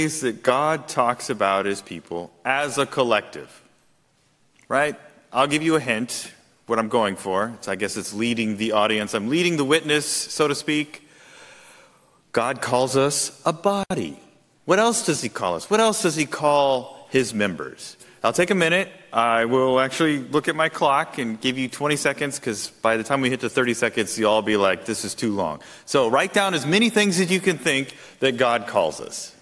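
Nothing is technically wrong with this audio.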